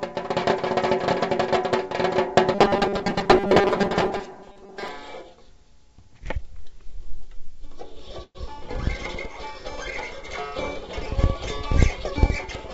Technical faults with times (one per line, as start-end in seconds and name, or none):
2.55-4.88 robotic sound from repeated short buffers
8.24-8.37 call audio freeze